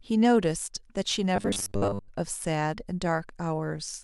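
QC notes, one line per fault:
1.36–2.09 s: robotic sound from repeated short buffers. The speech becomes a rigid, metallic buzz fixed at 100 Hz that still loosely follows the speech contour. The likely cause is a starved buffer looping its last 10 ms of audio, so most of the real signal in that span is skipped.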